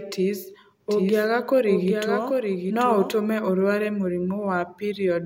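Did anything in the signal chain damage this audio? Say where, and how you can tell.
Yes: from 0.88 to 3.12 s, a dry copy trails roughly 0.7 s behind, starting and stopping abruptly. This doubled audio track likely comes from a slower capture path.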